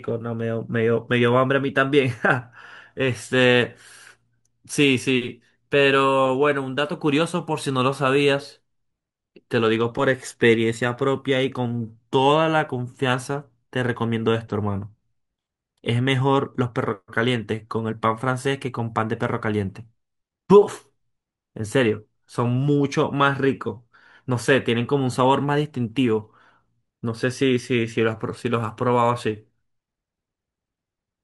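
Throughout the speech, the audio shows imaging from linear upsampling: it was converted from 24 kHz to 44.1 kHz by joining samples with straight lines, which filters poorly. That dulls the top of the original band and leaves a mirrored copy of the spectrum in the 12 to 24 kHz region, roughly 35 dB below the signal. It comes through as a faint metallic shimmer riding on sibilants.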